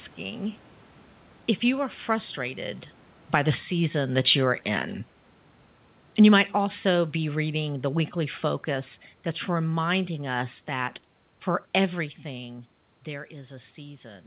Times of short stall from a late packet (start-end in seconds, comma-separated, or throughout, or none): none